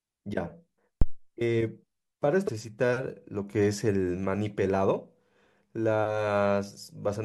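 At 1.02 to 1.20 s a deep low thump dies away within about 42 ms: a phantom power thump, where switching the supply on a live input sends a voltage step through the coupling capacitors. At 2.47 to 2.49 s a brief glitch marks damaged data in the compressed stream, where the decoder lost sync and resumed at the next frame.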